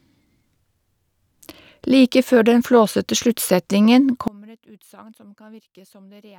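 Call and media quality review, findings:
One channel inverted, 4.28 s to end, right after "før den flåsete sluttsetningen". Speech drops about 27 dB, leaving a faint residue. Likely polarity reversal on one stereo leg; the centred speech common to both channels cancels in the mono sum.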